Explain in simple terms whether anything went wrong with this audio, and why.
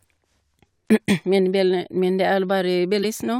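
Brief glitches break into the speech at 0.82 to 0.89 s and 2.99 to 3.05 s, caused by damaged data in a compressed stream, which made the player lose its place momentarily.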